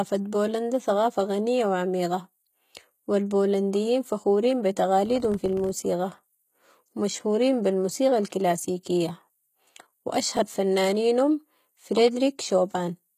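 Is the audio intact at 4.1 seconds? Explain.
No, 4.1 s falls within HE-AAC compression that runs the whole clip. The treble is rebuilt by copying lower bands upward, so s sounds turn gritty and lispy rather than dull, unlike a plain low-pass. It likely points to about 20 kbps, with nothing above 14.9 kHz.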